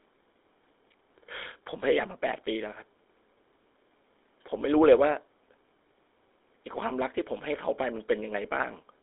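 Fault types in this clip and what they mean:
GSM full-rate codec: The speech went through the original GSM coder, which fits its 13 kbps full rate: a vocal-tract model driven by sparse, regularly spaced pulses. Sound is confined to about 300 Hz to 3.7 kHz, with plainly audible buzzy, gravelly roughness throughout.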